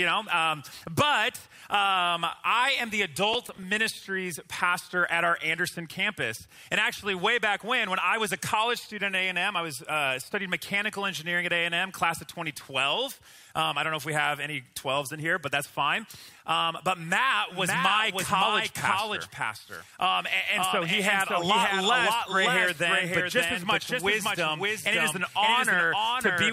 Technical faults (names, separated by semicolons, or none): processor overload crackle; doubled audio track